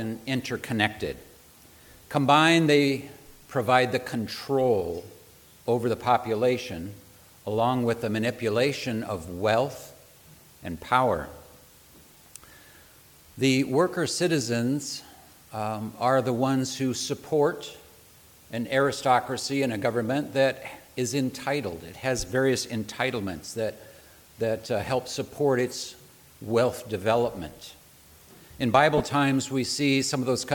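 At 28.98 to 29.00 s, lost LE Audio frames: about 20 ms of the Bluetooth stream, which fits two 10 ms LC3 frames, never arrived. The decoder filled the gap by replaying the last spectrum with randomised signs, so the sound there turns into a brief, noisy smear.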